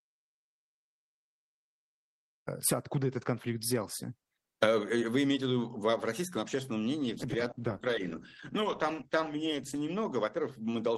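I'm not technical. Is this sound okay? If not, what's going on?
No. Two things go wrong. From the very start until 2.47 s there is an audio dropout to silence. The sound is simply absent, with no background at all. This is likely because the input was lost for a moment, and nothing was captured then.

From 7.03 s to 10.81 s there is a call bitrate drop. The connection briefly had less room, so the audio was squeezed much harder. It turns rough, murky and muffled, with the crisp top end gone. It then recovers.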